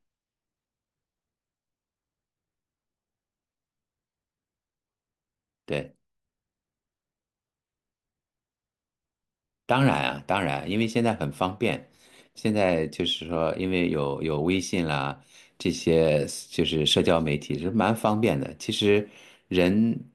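No technical faults are audible.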